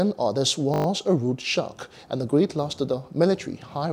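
From 0.74 to 0.86 s there's a system hang loop: the playback stalled, and a 20 ms chunk repeats six times, giving a brief 50 Hz buzz.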